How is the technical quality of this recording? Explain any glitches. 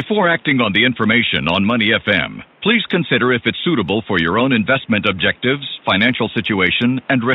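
No glitches or system faults are audible; the only background is the room's own ambient noise, sitting about 34 dB below the speech.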